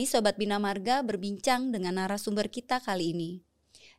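Nothing in this speech recording stands out as a technical fault; it simply runs along with no problems to point at.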